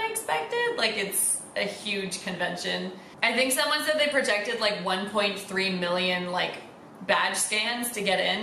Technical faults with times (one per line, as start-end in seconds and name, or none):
none